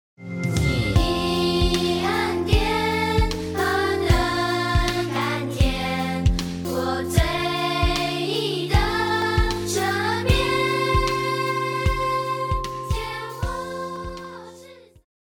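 Recording likely fell behind the hardware three times, so unread blocks were overwritten and the dropped buffer (overrun) joins the edges directly. At 5.16 s about 70 ms vanishes, at 9.22 s about 20 ms, at 13.96 s about 40 ms; each is heard as the sound jumping ahead.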